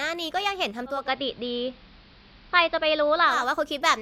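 Speech, with digital radio blending to analogue from 0.85 to 3.50 s. A 277 ms cross-fade brings in AM audio: hiss about 30 dB below the signal, and a level shift of about 1 dB.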